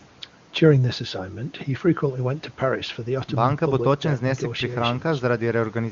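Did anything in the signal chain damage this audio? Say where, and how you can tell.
No, nothing in the chain damaged this speech; it has the bandwidth of an AMR wideband (HD Voice) codec and sounds like that codec's top rate, around 23.85 kbit/s, where any coding damage is faint at most.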